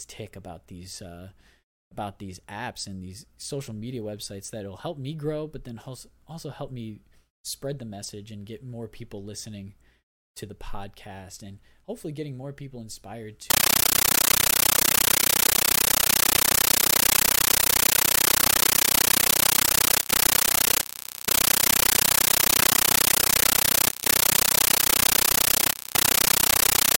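From 13.50 s to the end, the speech gives way to a compressed stream played as audio: undecoded AC-3 data treated as samples. It is harsh, very loud static chattering 31.25 times a second, each noise burst about 13.3 ms, fitting a 640 kbps stream.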